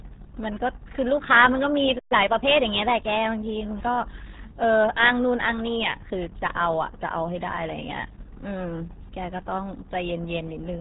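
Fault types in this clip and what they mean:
RealAudio 14.4 codec: an old dial-up speech codec, here around 8 kbit/s, strips everything above 3.8 kHz throughout, leaving speech heavily muffled and gargly.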